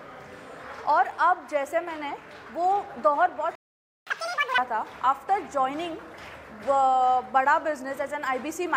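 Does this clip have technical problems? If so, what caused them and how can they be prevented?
Yes. At 3.55 s the sound drops out for about 0.51 s, a playback stall, likely caused by the player running short of buffered data or having its thread blocked. From 4.07 to 4.58 s it runs at double speed and sounds nearly an octave higher. This is catch-up at higher speed, as the player resamples its backlog to recover lost time. A larger playback buffer and a higher-priority audio thread would prevent the stall and the catch-up that follows it.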